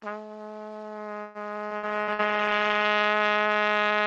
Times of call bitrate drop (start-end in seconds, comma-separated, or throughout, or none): 1.77-2.96